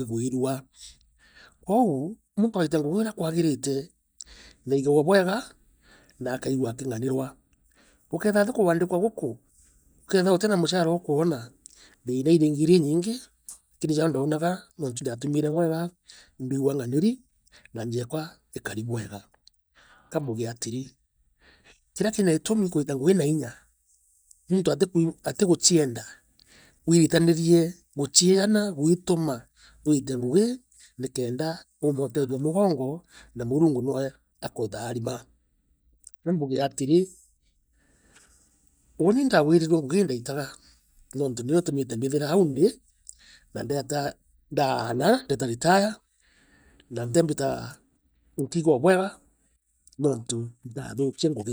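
Damaged data in a compressed stream appears at 47.15 s in this speech recording, as a single momentary event. At that point some of the encoded bytes are corrupt, so the decoder cannot interpret the affected frame correctly. It either produces garbage output for that instant or discards the frame, then loses its place in the bitstream and has to scan forward for the next valid frame header before normal decoding resumes. The result is a brief glitch that breaks the flow of the speech.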